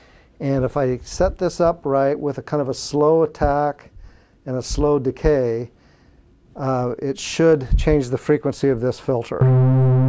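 No technical faults can be heard in this audio.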